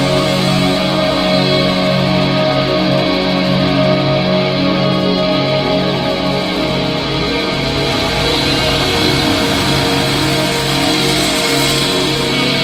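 Nothing in this one catches the ear as a fault; it just runs along with no glitches, dropouts or odd noises to point to.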